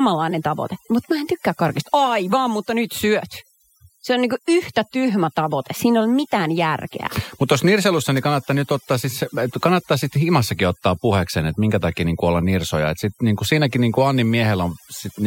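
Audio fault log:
Throughout: overdone noise removal. A noise reduction stage has been pushed too hard on this speech, so any frequency band that drops near the estimated noise floor is cut deeply or gated off entirely. The background in the gaps between phrases drops away, broken by small twinkling specks where isolated bands briefly pass. Low-level parts of the voice are removed with the noise.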